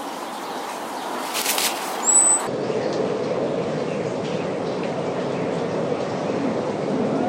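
From 2.47 s to the end there's a section at the wrong speed: it drops to 0.569x, about ten semitones lower, slow and deep, likely from being played back on the wrong clock.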